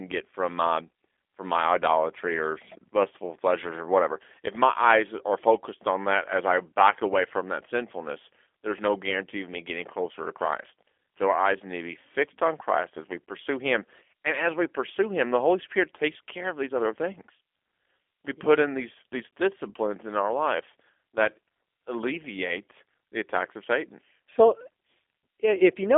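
From start to finish the speech carries G.729 codec damage, and the character points to the 8 kbit/s G.729A variant. The coder rebuilds each 10 ms frame from a vocal tract filter, a pitch predictor and a few sparse pulses, so voiced sounds come out rough and slightly synthetic. The line band runs from about 250 Hz to 3.5 kHz, with nothing above 3.6 kHz, leaving a thin, muffled telephone tone.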